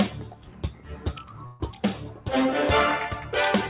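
Noise suppressor applied to music or sounds, throughout the clip: a suppressor tuned for speech treats sustained tones, ambience and decay tails as noise and keeps pulling them down. The level swings by around 10 dB, so the sound pumps and thins while attacks still get through.

Sound cut by the noise suppressor, from 0.34 to 0.88 s: here the suppressor judged the sound itself to be noise and turned it down by as much as about 5 dB, over roughly 400 ms in total. Held and fading parts sink, and their decay is cut short.

Call audio freeze, from 1.46 to 1.62 s: the stream stalls and 139 ms of the last sound is stretched into a fading buzz or hiss that never drops to silence. This likely happened because packets were late and the jitter buffer ran dry. When the audio resumes, it picks up exactly where it stopped, so nothing is lost and everything after it arrives 139 ms later. Across the clip, the call path leaves nothing above 4 kHz, which fits a G.711 A-law codec at 64 kbps.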